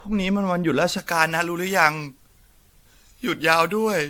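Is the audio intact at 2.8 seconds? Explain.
No. Generation loss runs throughout: the speech sounds swirly, smeared and hollow, with nothing above 18.7 kHz, likely from about five successive AAC-LC encodes at around 96 kbit/s. Pre-emphasis left on covers 0.98 s to the end: the treble boost was never undone, leaving 10 kHz about 11 dB above 1 kHz, which makes the speech thin, bright and sibilant.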